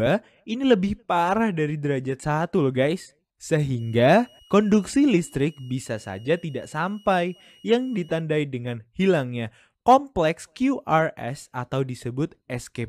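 A switching supply whistle runs from 3.79 s to 8.21 s. It is a thin, high tone around 3 kHz, roughly 35 dB below the main sound. Its pitch wanders between 2.87 and 2.92 kHz. A power supply cycling at an audible rate, or beating against another one, causes this.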